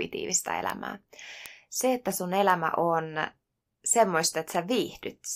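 Speech with four bit error spikes, heard as isolated sharp ticks at 0.70, 1.46, 2.50 and 4.55 s. Each is a single flipped bit that throws a sample's value by a power of two before it snaps back. The first three last one sample and the last lasts three. They reach about −11, −11, −17 and −23 dBFS. A waveform shows lone vertical needles, and a spectrogram shows thin full-height lines unrelated to the speech.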